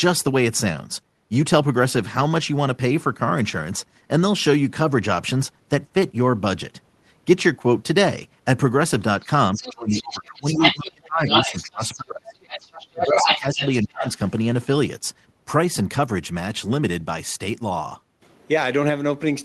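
From 9.26 to 12.42 s the speech dips by up to about 25 dB in pieces, around two seconds in all, likely speech suppressed in double talk. Unlike a network dropout, the gaps follow the moments when a second talker is present. That second talker, the other side's voice leaking through, likely from incomplete echo cancellation, enters at 9.54 to 10.86 s and 11.28 to 12.0 s, then again from 12.45 to 14.12 s. It is roughly as loud as the main speech, so it sounds like crosstalk rather than faint room echo. Between 12.9 and 14.05 s the main speech is chopped down again while that leak continues.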